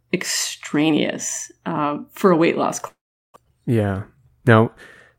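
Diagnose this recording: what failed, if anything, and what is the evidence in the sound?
Network stage, both times. Right after "for a weight loss", from 2.87 to 3.38 s, the sound smears into a fading buzz, then goes quiet for about 380 ms and resumes with roughly 400 ms simply gone. That's a long network dropout, likely, with the receiver concealing the gap.

Then from 3.45 to 4.18 s it runs about 106% fast at unchanged pitch, a bit rushed. That's a jitter buffer speed-up: the late audio piled up, and the receiver trimmed tiny pitch-period slices, around 50 ms in total, to catch up.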